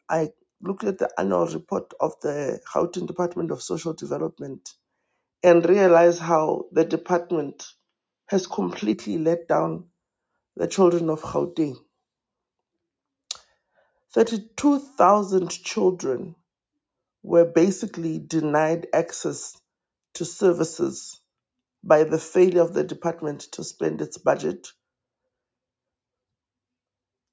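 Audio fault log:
5.47–8.93 s, input switched to a poorer device: the sound abruptly turns duller and boxier, with a narrower band where the rest of the clip reaches the 8 kHz ceiling of its call processing. The level shifts by roughly 5 dB and a faint new noise floor appears, around 55 dB below the signal, with no gap at either transition. The likely cause is the input jumping to a narrower-band microphone or headset profile with its own tone and noise, then switching back.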